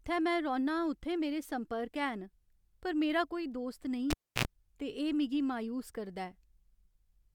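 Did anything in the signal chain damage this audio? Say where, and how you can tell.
Yes. At 4.10 s the speech snaps off with a pop and drops to near silence for about 0.30 s. A 65 ms burst of 60 Hz buzz and a second pop then bring it back before "ते एह् मिगी मायूस" at 4.45 s. This is a cable pulled and plugged in on the analogue wiring: the tip touched ungrounded and picked up mains hum before seating.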